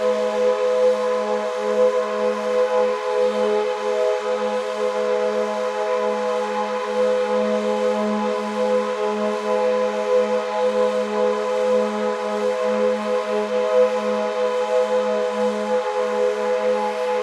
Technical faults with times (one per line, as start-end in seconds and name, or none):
none